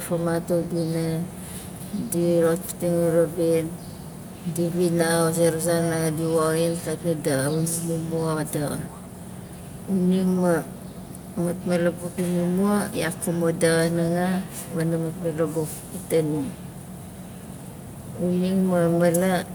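No technical faults found in this speech recording.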